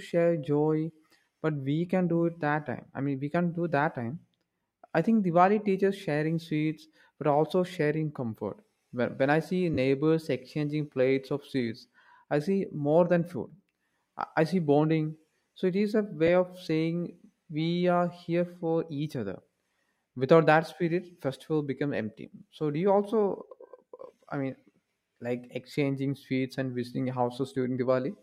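Lost LE Audio frames cause two brief smears in this speech. At 9.74 to 9.78 s, after "when I see", 30 ms drops out, which fits three lost frames. The decoder repeats the last spectrum with random signs, so the sound turns noisy. At 16.27 s, after "it is a", a 10 ms loss leaves a shorter blur.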